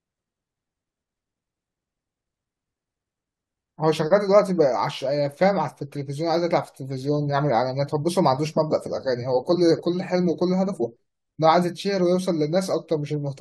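Nothing goes wrong anywhere in this bit of speech; there are no technical faults to point to at any moment.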